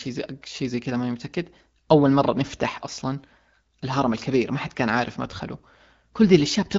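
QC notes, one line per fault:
The speech passes through an AMR wideband (HD Voice) link at 12.65 kbit/s, with content reaching up to about 7.6 kHz and only light coding effects, as expected at that rate.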